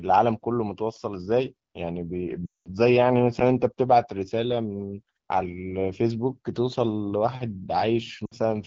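A wideband speech recording has lost AMR speech frames twice. From 2.46 to 2.67 s, about 200 ms of frames drop out. The decoder drops to near silence within two frames, and the voice returns weak or rough for a moment. A shorter 60 ms gap at 8.26 to 8.34 s also drops the voice to near silence. The clear speech elsewhere fits AMR-WB at 12.65 kbit/s or higher.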